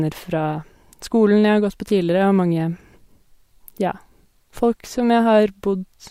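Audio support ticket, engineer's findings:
Findings: no audio fault identified in the speech recording.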